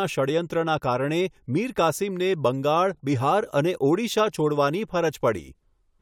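Nothing in this recording trips up the ear: no faults show up anywhere along the way, so there's nothing to flag.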